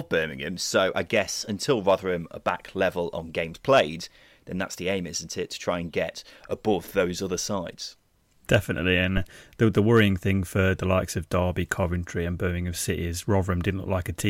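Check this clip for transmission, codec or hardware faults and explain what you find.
One hardware fault appears. From 9.17 to 9.27 s a phantom power thump occurs: a supply switching on or off on the live input pushes a voltage step through the coupling capacitors, producing a deep thump peaking at about -14 dBFS and decaying within 22 ms. Its abrupt electrical edge sets it apart from a plosive or handling bump.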